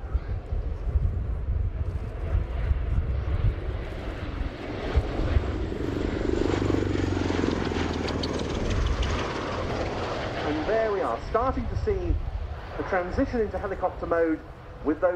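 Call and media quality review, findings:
No faults found in this recording. Nothing to escalate, and no component needs follow-up.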